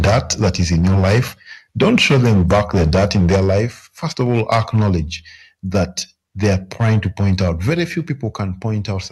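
From 0.0 to 1.2 s, 1.81 to 3.64 s, 4.21 to 4.96 s and 6.43 to 7.7 s, the sound crackles harshly, most likely from microphone overload driving peaks about 7 to 12 dB past the converter's limit. The waveform shows flat-topped peaks, and the spectrogram shows smeared high-frequency distortion. At 0.06, 3.36 and 7.7 s, the level falls abruptly by about 4 to 5 dB, likely the microphone volume stepped down by the call software. This appears as a sudden step in the waveform envelope.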